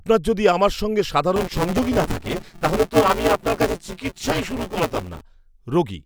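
A speech recording with buffer tearing from 1.36 s to 5.21 s. The writing and reading sides of the playback ring buffer have drifted so they cross within every period. Nearly a third of each block is stale audio from about 10 ms earlier, spliced in with hard edges. This produces a robotic 172 Hz rattle, which fits a 256-sample buffer. On a spectrogram, evenly spaced vertical striations and a 172 Hz harmonic comb appear wherever the voice is present. The waveform shows abrupt steps at each join.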